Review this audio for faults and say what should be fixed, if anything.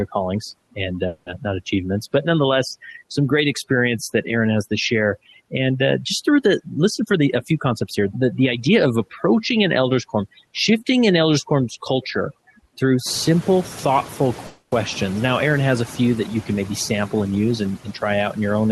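Overdone noise removal runs throughout: bands near the noise estimate are pushed almost to zero, leaving near-silent gaps with twinkling specks. Unlike ordinary suppression, the background nearly vanishes rather than breathing. Set the noise reduction to a milder strength so quiet speech components survive.

Noise suppressor artifacts are also present throughout. Steady noise is cut by about 11 dB between words and rises back under speech. This pumping sets it apart from the static near-silence of the heavier removal, and the room noise rises by about 19 dB around 13 s. Use a gentler suppressor or reduce the room noise at the source.

Call audio freezes occur at 1.07 to 1.28 s, right after "callings and", and at 14.47 to 14.74 s, after "culture through simple thoughtful". In each, the last sound is stretched into a fading buzz or hiss lasting about 0.19 s and 0.25 s, then speech resumes exactly where it stopped. 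Nothing is lost, which distinguishes this from a packet dropout. The likely cause is delayed packets emptying the jitter buffer. Give the buffer more headroom or improve network stability.

Jitter buffer speed-up runs from 7.00 to 9.00 s, starting after "uh just through the". The receiver trims short pitch-period slices, roughly 0.2 s in total, so speech runs about 10% fast at unchanged pitch. The unchanged pitch separates it from a resampling error. Smoothing packet delivery avoids the backlog that triggers this catch-up.

The Opus call path limits bandwidth to 12 kHz, which is expected behaviour for that codec.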